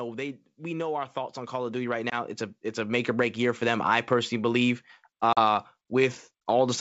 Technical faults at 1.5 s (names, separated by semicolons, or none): automatic gain rising